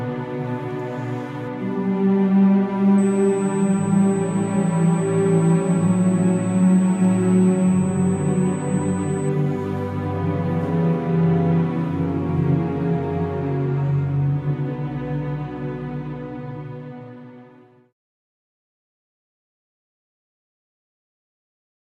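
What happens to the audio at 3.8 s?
A steady, fixed-pitch whine sits high under the audio at 8 kHz, strongest at 16 kHz, from 2.98 to 9.29 s: USB whine, bus microframe current leaking through power or ground.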